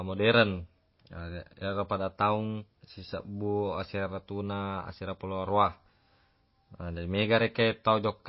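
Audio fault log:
Throughout, MP3 compression: nothing is heard above 5.5 kHz, and the speech has a plainly watery, swirling texture with smeared onsets. This is likely a very low-bitrate MP3 encode, around 24 kbps, cutting the treble and switching weak frequency lines on and off between frames.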